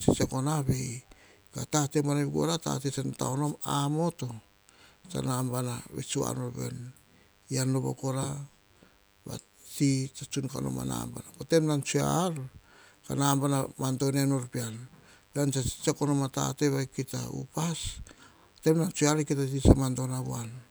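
From the first moment to the last, a thin buzz sits underneath the speech: DECT cordless phone buzz. A DECT handset or base nearby is firing a short radio burst every 10 ms, and something in the audio chain is rectifying it, so those bursts turn into a steady 100 Hz buzz packed with harmonics. It's fairly low, roughly 35 dB under the speech, but it never lets up.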